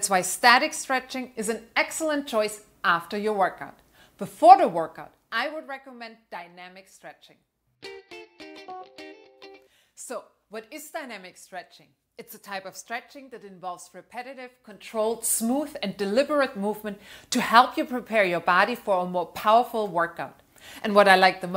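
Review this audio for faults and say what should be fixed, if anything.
No faults found; nothing to fix.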